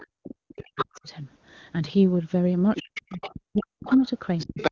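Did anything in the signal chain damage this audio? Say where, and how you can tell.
Yes. Speech suppressed in double talk appears three times: from 0.01 to 1.08 s, from 2.79 to 3.89 s, and from 4.48 to 4.71 s. The talker's level dips or breaks into pieces by about 40 dB in the first two stretches and about 25 dB in the last. The likely cause is the call processing's echo canceller, which mistook overlapping talk for echo and attenuated everything. On a waveform the envelope collapses in chunks, and a spectrogram shows the harmonics fading to near-blank columns.

The other side's voice leaking through also shows three times: from 0.57 to 0.98 s at about 5 dB below the speech, from 2.76 to 4.07 s at about 15 dB below, and from 4.38 to 4.71 s at about 5 dB below. This is again likely the echo canceller, this time leaving part of the loudspeaker signal in the microphone path. A spectrogram shows a second, independent harmonic pattern overlapping the talker's. 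On the waveform, energy persists through the suppressed gaps.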